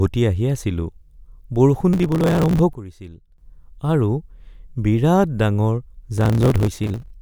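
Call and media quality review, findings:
Processor overload crackle at 1.93–2.59 s and 6.17–7.11 s: gritty tearing over the speech, lots of tiny skipped chunks, which fits a very small buffer (under a millisecond) repeatedly missing its deadline.

Sudden gain jump at 2.73–3.38 s: speech and background noise drop together by about 12 dB, then come back. Likely a digital gain step applied with no ramp.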